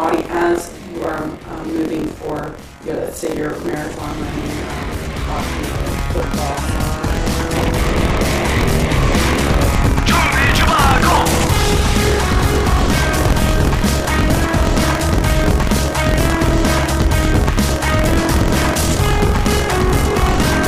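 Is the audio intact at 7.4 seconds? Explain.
No: buffer tearing runs throughout, including 7.4 s. Writer and reader cross each period, splicing in slightly older audio. This gives a 43.1 Hz buzz, which fits a 1024-sample buffer and, unlike hum, disappears in silence.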